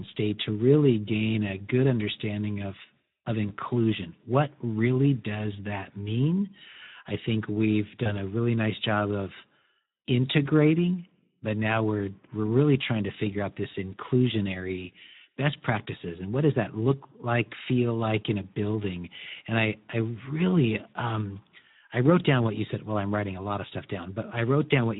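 The whole clip carries Speex codec damage, a hoarse, noisy edge on the speech that fits a low setting around 11 kbps, with too few bits for the excitation. At 3.47 to 3.54 s, after "good understanding of of", and again at 8.03 to 8.13 s, between "mean i think we've" and "a really nice job", there's packet loss concealed by the speech codec. A gap consistent with a single 20 ms frame gets bridged with a buzzy or noisy, fading guess, and the voice stays weak or distorted for tens of milliseconds or more after.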